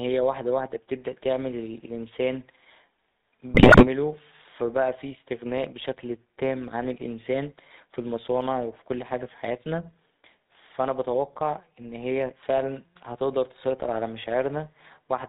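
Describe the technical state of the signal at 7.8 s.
At 7.8 s you're hearing the GSM full-rate codec, and it's not a local event; it runs through the whole clip. The codec models the vocal tract as a filter and drives it with a thinned-out train of regular pulses rather than the real excitation, so the speech comes out buzzy and gravelly, with nothing above 4 kHz. The damage is plainly audible, which fits the 13 kbps full-rate mode.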